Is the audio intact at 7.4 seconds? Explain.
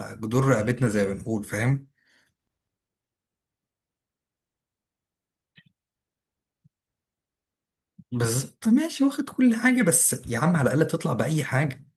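Yes, the speech at 7.4 seconds plays through intact, with no audible fault at that moment.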